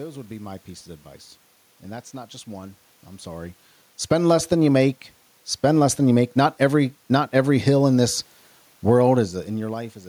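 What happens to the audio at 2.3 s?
Nothing goes wrong at 2.3 s: the speech there is intact, with only the ordinary background noise of the room underneath it.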